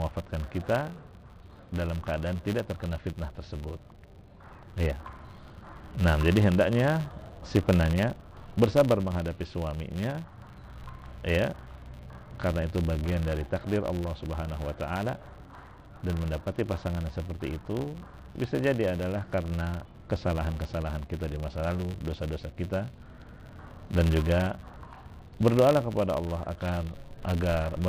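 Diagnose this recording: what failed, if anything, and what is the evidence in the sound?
A filter in the call processing stage is restarted on every block, losing its state and starting each block from silence. The result is a 100 Hz buzz running throughout, one small transient per block, which fits 10 ms blocks, rising and falling with the signal's level.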